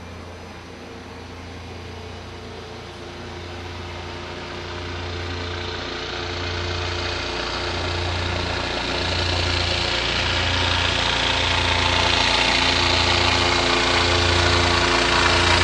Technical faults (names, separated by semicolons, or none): none